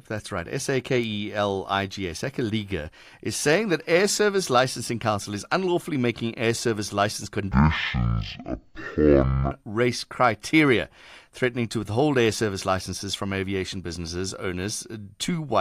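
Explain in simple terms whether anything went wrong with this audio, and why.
Right after "making air service license", from 7.51 to 9.51 s, the speech drops to half speed and an octave lower. That's stereo read as mono: left and right samples were played one after another as a single channel, until "race criteria threatening to".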